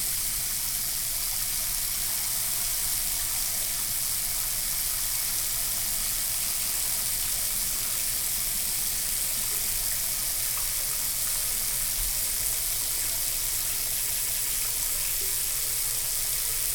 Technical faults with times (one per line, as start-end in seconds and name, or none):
6.54-6.74 repeated frames
14.09-14.49 repeated frames